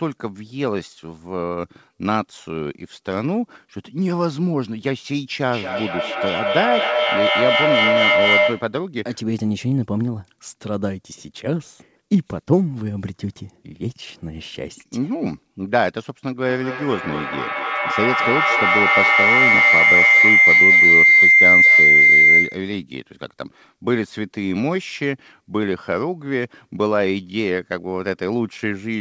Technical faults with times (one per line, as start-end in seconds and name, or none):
5.46-8.80 feedback howl
16.45-22.73 feedback howl